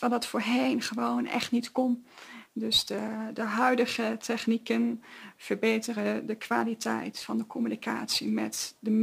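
From start to finish the clip carries crude rate conversion. Samples seem repeated to stretch the rate, which fits 44.1 kHz raised to 48 kHz without filtering. This leaves inharmonic error tones about 25 dB below the sound, heard as a gritty fizz tracking loud, high content.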